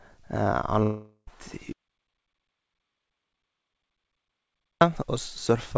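From 0.83 to 1.30 s the speech breaks up in what is likely a long network dropout. Instead of continuing, the last sound is stretched into a buzzy tone that fades away, ending in roughly a tenth of a second of silence, and the speech resumes further on with about 0.45 s missing. On a spectrogram, the final harmonics smear into flat horizontal bands that dim out. On the waveform, a repeating, decaying pattern gives way to a short gap.

From 1.73 to 4.81 s comes an audio dropout to silence. The sound cuts off abruptly and about 3.1 s is simply gone, with no room tone or background noise left. The likely cause is that the input was lost, through a disconnected device or failed link, while silence kept being written. The waveform sits on a flat line with hard edges at both ends, and the spectrogram is completely empty across all frequencies, including below the 8 kHz ceiling that the call codec, consistent with G.722, imposes on the rest of the clip.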